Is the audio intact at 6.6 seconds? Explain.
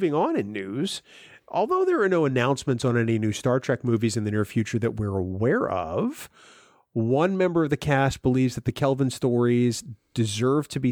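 Yes, the speech at 6.6 seconds plays through intact, with no fault at that moment.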